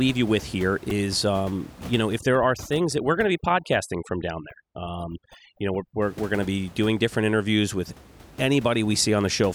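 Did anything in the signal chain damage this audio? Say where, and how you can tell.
Yes. At 0.90 s there is a repeated buffer at the driver or buffer stage. The audio did not arrive in time, so one tiny slice of about 2.7 ms played four extra times, which fits a 128-sample buffer. It sounds like a brief buzzy click, and roughly 10 ms of speech is lost.

From 2.19 to 6.02 s, overdone noise removal in the call processing stage damages the speech. The room noise sits about 20 dB below the speech. Here it drops and breaks up into twinkling specks. Quiet parts of the speech vanish along with it.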